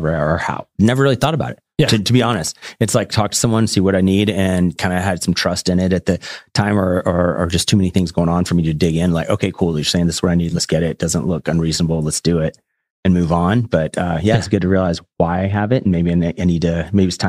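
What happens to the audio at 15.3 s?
The speech turns dull and muffled, its treble rolled away, from 14.46 s to 17.28 s. This is de-emphasis applied wrongly: a treble cut meant to reverse pre-emphasis was applied to audio that had none, sloping the response down smoothly to about 11 dB below 1 kHz at 10 kHz.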